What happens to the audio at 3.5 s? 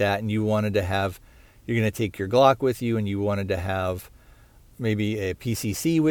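Nothing goes wrong at 3.5 s: the speech carries on intact through that moment, with no dropout, click or other fault.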